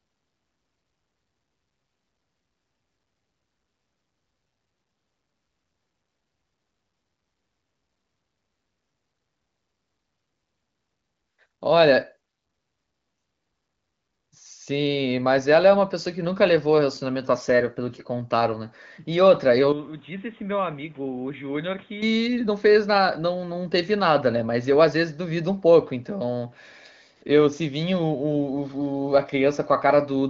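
From 19.72 s to 22.02 s the speech suddenly goes dull and boxy, with nothing above 3.8 kHz, where the rest of the clip reaches up near 6.9 kHz through the AMR wideband (HD Voice) codec. The level drops by about 10 dB, and a new noise floor appears roughly 30 dB under the speech. There's no gap at the change. That's likely the input switched to a poorer device, a narrower-band microphone with its own tone and background noise, before it switches back.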